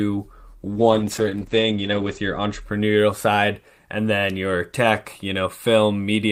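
Speech with a call bitrate drop from 0.73 s to 2.67 s: the encoder starves, and for about 1.45 s the sound turns coarse and watery, which fits a fall from roughly 40 to 10 kbps. A spectrogram shows energy above 8 kHz vanishing where content previously reached 20 kHz.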